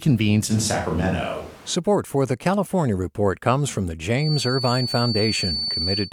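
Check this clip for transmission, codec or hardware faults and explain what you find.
Two faults stand out, one in the pickup and one in the playback loop.

From 0.52 to 1.74 s, ending just before "for the", a switch to a distant microphone likely occurs. The sound turns abruptly roomy and hollow, with thinner bass and background noise well below the speech, while the level barely changes. The sudden jump in and out distinguishes it from natural room reverberation.

From 4.13 s to the end, after "comes from the", a feedback whistle appears. It is a steady 4.5 kHz tone a little below the speech, likely from a loudspeaker-to-microphone loop held just short of runaway. Unlike full howl, it swells and fades slowly in level without ever building up.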